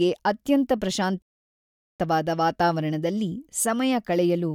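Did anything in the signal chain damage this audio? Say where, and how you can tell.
Yes, at the playback stage. The speech cuts to silence at 1.22 s and stays silent until 2.00 s, a gap of about 0.78 s. This is a playback stall, most likely the player running out of buffered data or its output thread being blocked.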